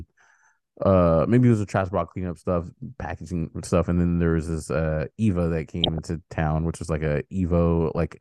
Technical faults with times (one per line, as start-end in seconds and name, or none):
5.83-5.98 DAB burbling
7.94-7.98 DAB burbling